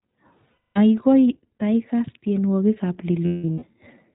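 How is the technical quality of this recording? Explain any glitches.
Quality is limited by low-bitrate voice coding throughout, with two dropouts.

iLBC codec, throughout: the speech is band-limited to nothing above 4 kHz and sounds slightly rough and synthetic, plainly so. Each short frame's excitation is coded independently; the character fits iLBC's 15.2 kbps mode with 20 ms frames.

Lost iLBC frames, 0.52 to 0.78 s and 3.26 to 3.64 s: missing packets force the decoder to repeat the last pitch cycle blended with noise. The first gap loses 240 ms. The second totals 300 ms, scattered across 0.36 s, with the longest run about a fifth of a second. Both sound like a held, buzzy vowel, and the speech recovers almost immediately afterward.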